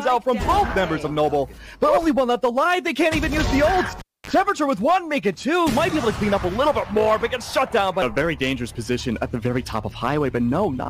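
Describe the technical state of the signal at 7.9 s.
At 7.9 s the signal is intact, with no audible fault at that point.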